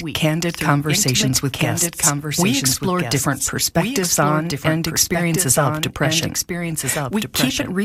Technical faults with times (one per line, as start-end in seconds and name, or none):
0.00-7.85 doubled audio track